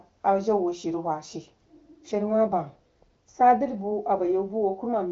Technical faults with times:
none

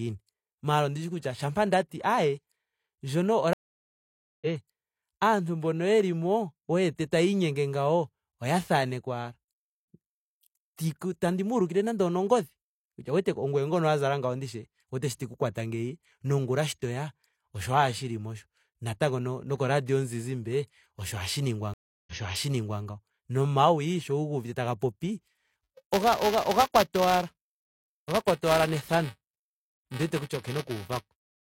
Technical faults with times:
3.53-4.47 stream reconnect
21.74-22.81 stream reconnect
25.32-31.41 buffer tearing

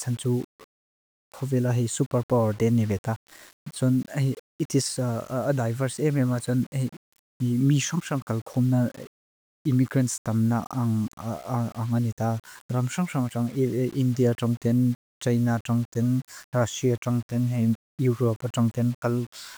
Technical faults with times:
0.00-19.57 low bit depth without dither

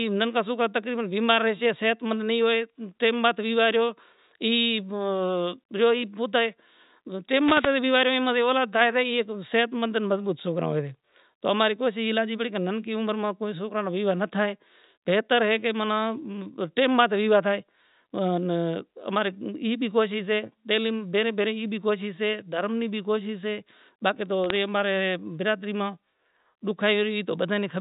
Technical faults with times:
7.40-7.75 wireless microphone noise hit
24.44-24.56 bit errors on a digital phone line

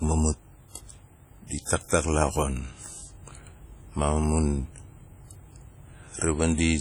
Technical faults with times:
0.00-6.81 WMA compression

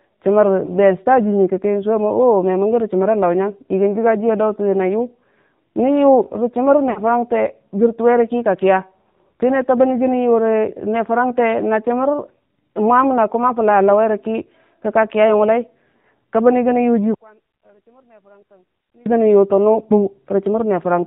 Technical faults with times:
0.00-21.07 AMR narrowband mobile codec
0.66-0.71 lost AMR speech frames
6.90-7.01 lost AMR speech frames
17.14-19.06 one channel inverted

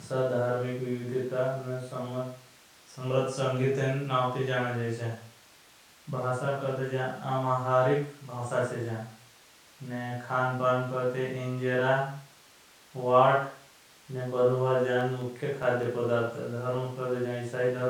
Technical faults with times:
15.01-16.24 CD scratch ticks

